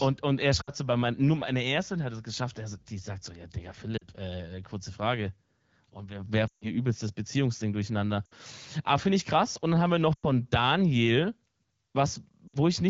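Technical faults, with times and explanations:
0.61–0.70, 3.98–4.05, 6.48–6.69, 8.26–8.34, 10.14–10.25 and 12.48–12.55 s, lost AMR speech frames: each gap is a run of lost frames where the wideband decoder repeats the last good pitch and vocal tract settings at falling gain, dropping to near silence within two frames. The longest, 140 ms at 6.48 s, fades to near silence, and speech comes back weak for a moment.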